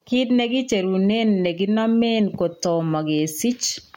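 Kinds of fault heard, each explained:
Gain pumping: The level of this speech rises and falls with its own loudness throughout. The swing is roughly 10 dB. Loud and quiet moments sit close together, so the sound feels squashed and breathing. The likely cause is input gain set far too high, with a fast limiter or compressor pulling it down on every peak.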